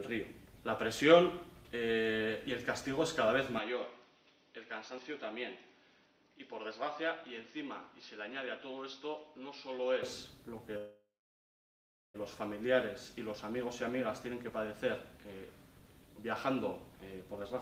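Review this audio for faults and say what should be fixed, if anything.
From 3.58 to 10.03 s the recording likely switched its input to a poorer device, a narrower-band microphone or headset profile. The sound turns duller, with nothing above 6 kHz, drops about 5 dB in level, and picks up a faint new noise floor, with no silence at either switch. To prevent it, pin the input device and stop the system from changing it automatically during a recording.

From 10.77 to 12.16 s a call audio freeze occurs, likely because delayed packets left the jitter buffer empty. The last sound is stretched out and fades, and about 1.04 s of that stretch is silent. When playback resumes, nothing has been lost, but roughly 1.37 s of extra delay has been inserted. To prevent it, give the call a more stable network path or a deeper jitter buffer so late packets arrive before the buffer drains.

From 16.89 to 17.54 s a jitter buffer speed-up shortens the audio. 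The receiver, holding more delay than it targets, cuts short pitch-period slices repeatedly, removing about 50 ms in total. The sound plays at 106% speed with its pitch unchanged and comes across as slightly hurried. To prevent it, reduce packet bunching on the network so the buffer does not overfill and need to catch up.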